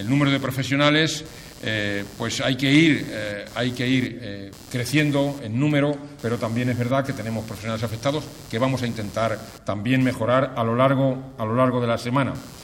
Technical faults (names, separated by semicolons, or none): computer activity noise